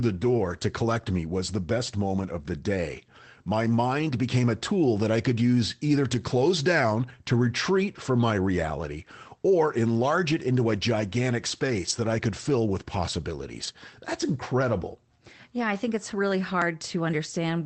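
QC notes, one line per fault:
6.19 s and 11.89–11.91 s, lost packet rebuilt from error correction: a single lost packet was replaced by the low-bitrate copy carried in the next packet, giving a brief rough, noisy 20 ms patch with no gap.
13.51–13.69 s, lost packet rebuilt from error correction: a run of separate losses, which fits about five 20 ms packets, was filled from lower-quality copies, so 100 ms of sound turns grainy and noisier instead of dropping out.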